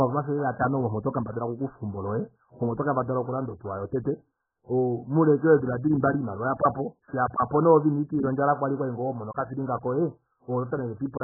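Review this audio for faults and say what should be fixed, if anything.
Throughout, the speech sounds muffled and boxy, with nothing above 1.7 kHz, and sustained vowels and sibilants carry a warbling, watery smear. The likely cause is heavy AAC compression. An AAC-LC encoder starved of bits, which fits a bitrate around 8 kbps, drops the upper band entirely and quantises the remaining frequency lines so coarsely that the spectrum breaks into shifting holes. Encode from the original source at a substantially higher bitrate.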